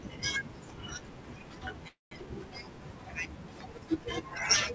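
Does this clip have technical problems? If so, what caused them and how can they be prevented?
Yes, there's a call audio freeze in this speech from 1.88 to 2.27 s. The sound stalls and gets stretched into a fading buzz for roughly a quarter second, then drops to silence for about 0.15 s before the speech picks up exactly where it left off. Nothing is lost, but everything after it lands about 0.23 s late. The likely cause is packets held up in transit, so the jitter buffer ran dry and had to fill in. Up to 8 kHz the G.722 call path itself sounds as expected. To prevent it, give the jitter buffer more headroom or fix the congestion on the network path.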